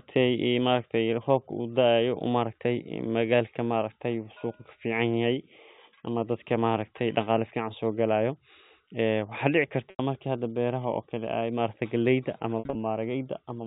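Packets dropped out of this telephone-band speech twice, and the receiver covered each gap with packet loss concealment by pitch repetition, looping the last pitch period and fading it. The first loss, about 90 ms at 9.90 s, comes across as a briefly held, buzzy tone. The second, at 12.59 to 12.75 s, is 130 ms of losses scattered over 160 ms, with the longest run lasting 60 ms.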